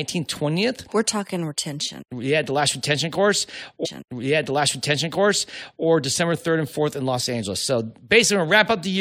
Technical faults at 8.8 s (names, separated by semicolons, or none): none